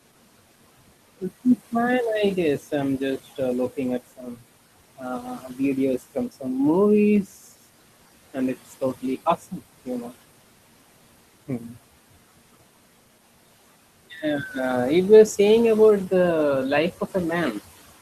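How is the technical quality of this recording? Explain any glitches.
The recording has two related faults, both from an over-aggressive noise suppressor acting on the room noise, which sits about 18 dB below the speech.

Noise suppressor artifacts run through the whole clip. The suppressor estimates the steady background and pulls down every frequency band it judges to be noise, frame by frame, here by about 17 dB. Because that decision changes from moment to moment, the background drops away in the pauses and comes back under the speech.

Speech cut by the noise suppressor happens at 4.17–4.43 s, 4.97–5.59 s, 5.99–6.44 s, 9.39–10.12 s and 11.48–11.77 s. In these spans the suppressor mistook quiet parts of the speech for background and turned them down along with it. The dips are about 13, 12, 11, 13 and 9 dB, and each lasts only a tenth to a fifth of a second or so within its span. Those parts sound swallowed or faint, as though soft sounds were clipped off.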